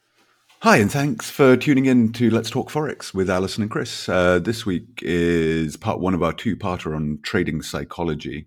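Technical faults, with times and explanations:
No technical faults are audible anywhere in this speech recording.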